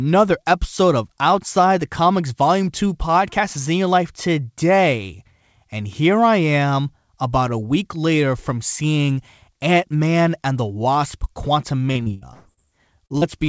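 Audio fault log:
11.92–12.67 s, repeated packet loss (robotic sound): five gaps, longest 120 ms, patched by extending prior sound, about 42% of the stretch concealed, giving choppy speech with pieces missing.
13.06 s and 13.18 s, short concealed packet loss: two 40 ms holes filled by continuing the previous sound, then crossfaded back, heard as brief smears.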